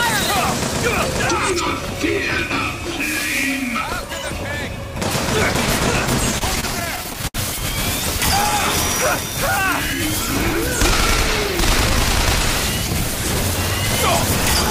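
Between 6.31 and 7.36 s the audio shows repeated stalls (stutter): fourteen brief hitches, the longest about 71 ms, where the receiver's jitter buffer ran dry because packets arrived late or too slowly, and the last sound was held to bridge each wait. About 230 ms is filled this way, roughly a fifth of that stretch. Unlike packet-loss dropouts, nothing is skipped. The sound drags and resumes where it left off.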